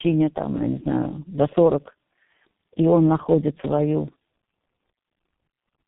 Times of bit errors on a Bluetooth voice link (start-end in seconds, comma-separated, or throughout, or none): none